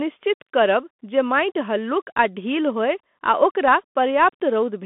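Throughout, the speech shows Bluetooth CVSD headset codec damage: nothing above 3.8 kHz, with scratchy s sounds and granular hiss, unlike a clean telephone band-limit.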